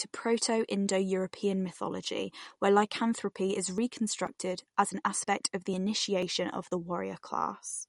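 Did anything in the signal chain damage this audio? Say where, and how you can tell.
Yes. From start to end the treble stops sharply near 11.2 kHz, with watery, swirling consonants, which is likely codec damage from MP3 compression at roughly 48 kbps rather than plain filtering.

Periodic USB or driver dropouts in the driver or buffer stage: after "mythology where lycanthropy is", from 3.78 to 7.70 s, about ten ticks come every 0.49 s. Roughly 10 ms is skipped each time, and the strict spacing rules out random network loss.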